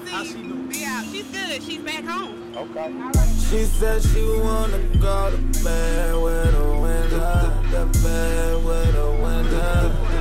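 Nothing technically wrong turns up anywhere in this audio, so there's no fault here to pin a time or a cause on.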